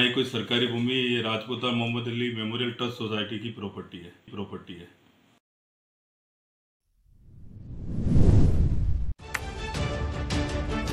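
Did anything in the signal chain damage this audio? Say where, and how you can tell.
Yes, at the Bluetooth codec stage. From 7.56 s to 10.82 s the treble dulls and a gritty noise rises. This points to a Bluetooth SBC bit pool drop: the sound fits the bit pool falling from 31 to 13 (about 94 kbps), starving the upper sub-bands and coarsening the rest.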